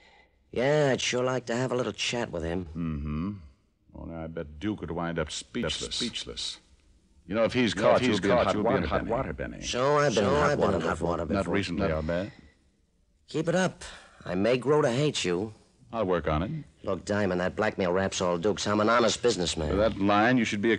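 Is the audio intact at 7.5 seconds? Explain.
No. A doubled audio track runs from 5.63 to 11.95 s, likely because the sound is captured a second time through a slower path. A dry, full-band copy trails about half a second behind at roughly equal level, starting and stopping abruptly.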